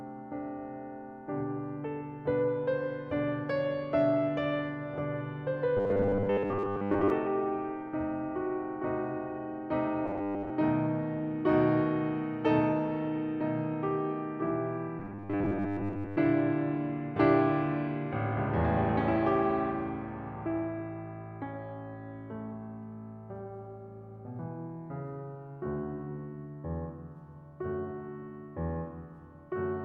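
Music, with robotic sound from repeated short buffers at 5.77–7.10, 10.06–10.51 and 14.99–16.17 s: a rigid 100 Hz buzz, likely from a 10 ms block replayed over most of the audio, appearing as identical waveform cycles and evenly spaced spectrogram stripes.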